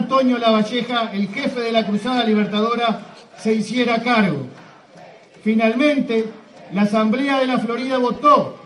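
The whole clip has a dull, grainy quality, with the top end thinned out and a gurgle under everything. That sounds like MP2 compression, likely from MPEG Layer II at a low rate. The damage is plainly audible and fits something around 80 kbps, where the encoder can't feed bits to the upper sub-bands, so they drop out or flicker while the remaining bands get quantised coarsely enough to turn granular. Then right at the end, from 8.15 to 8.2 s, there's a short burst, classic DAB burbling. It's the sound of weak reception letting bit errors through the error correction, at a rate that fits a fraction of a percent. Corrupted samples put short blips of noise into single sub-bands, and corrupted scale factors make sub-bands jump in level for up to a frame, and that 50 ms burst fits a run of several damaged frames.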